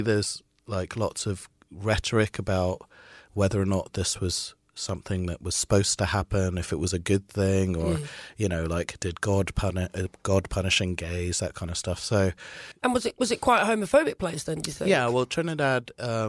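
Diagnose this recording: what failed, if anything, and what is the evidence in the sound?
Listening through the speech, nothing stood out as a failure at any stage of the chain.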